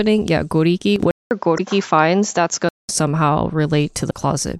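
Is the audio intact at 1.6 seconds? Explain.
No. At 1.6 s the compressed stream carries damaged data from 1.55 to 1.60 s; the decoder misreads those frames and resyncs, giving a brief glitch. This falls inside the span from 1.11 to 2.89 s where the input likely switched to a poorer device: a 200 ms silence, then duller sound with nothing above 7.6 kHz, faint new background noise, and roughly unchanged level.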